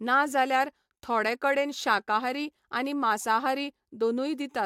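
From start to finish the speech carries sample clock jitter: the converter's timing wanders by something under a microsecond, so each sample lands slightly off its proper instant. The resulting error scales with how fast the waveform is changing, sitting roughly 45 dB below the signal. It comes across as a faint grainy hiss riding on sibilants and louder, brighter passages. Unlike a steady noise floor, it disappears completely in the pauses between phrases.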